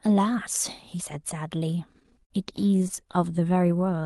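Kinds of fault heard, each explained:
Repeated stalls (stutter): between 1.93 and 3.15 s the jitter buffer ran dry again and again, so the receiver stretched the last sound over 18 short gaps, the longest 50 ms, filling about 0.22 s with nothing lost. Waveform and spectrogram show brief repeated, smeared stretches.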